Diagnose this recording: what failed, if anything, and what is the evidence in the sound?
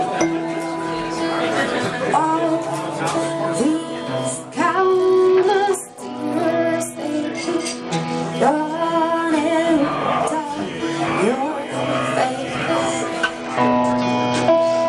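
Bluetooth SBC bit pool drop, codec stage, at 4.74–8.31 s and 13.41 s to the end: treble dulls and gritty noise rises, which fits a congested link starving sub-bands of bits.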